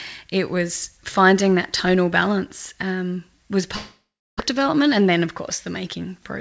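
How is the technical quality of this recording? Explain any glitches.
There is one clear glitch. The call path's G.722 coding leaves nothing above 8 kHz.

From 3.76 to 4.42 s, after "tonal balance um was", a long network dropout likely lost about 600 ms of audio. The last sound stretches into a fading buzz, then about 320 ms of silence before speech resumes. A brief packet loss would never reach silence.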